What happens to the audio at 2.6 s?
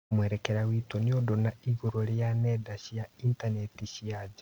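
Nothing goes wrong at 2.6 s; the speech carries straight through that moment with no dropout, click, distortion or other fault.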